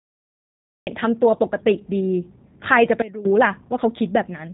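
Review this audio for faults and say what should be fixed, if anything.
G.729 codec damage runs throughout: the speech sounds rough and synthetic, and a spectrogram shows nothing above 3.8 kHz, which fits an 8 kbit/s G.729 codec. Use a wideband codec for the link.

Cut-off start: the waveform is flat digital silence until 0.87 s, then the speech begins abruptly mid-sound with no attack. Start recording before the speaker begins.

Sudden gain jump from 3.02 to 3.25 s: speech and background drop together by about 18 dB, a sharp step in the waveform envelope, likely from an unramped gain change. Apply gain changes with a short ramp.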